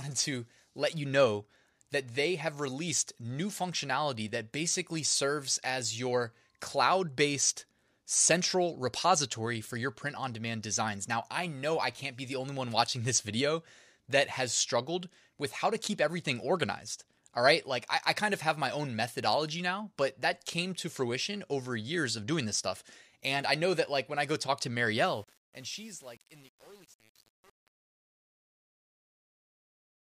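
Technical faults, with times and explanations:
24.97–30.03 s, truncation distortion on a fade: after "I go talk to", the fade-out turns gritty, since undithered steps consistent with 8-bit resolution square off the waveform.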